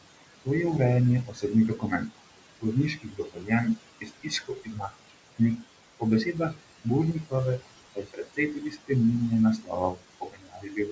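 Speech over room noise sitting about 12 dB below it, and the noise suppressor is working hard: noise suppressor artifacts run throughout, with the background pulled down by about 19 dB. It also eats into the speech itself, cutting speech between 1.25 and 2.19 s, 2.61 and 5.64 s (roughly a second and a half lost there), 6.0 and 7.62 s, 7.95 and 8.9 s, and 9.58 s to the end. Quiet bits drop by up to about 20 dB and sound swallowed. The call path audibly stops around 8 kHz, which fits a G.722 codec at 64 kbps.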